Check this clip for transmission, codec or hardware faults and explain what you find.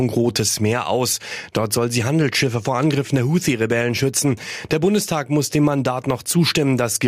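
One fault is present: gain pumping, running through the whole speech clip. The level ducks under each loud syllable, swinging by roughly 10 dB, which flattens the dynamics. The likely cause is input gain set far too high, with a fast limiter repeatedly pulling it back. Unlike a noise gate, which drops the gaps toward silence, here the level is pulled down on the loud sounds.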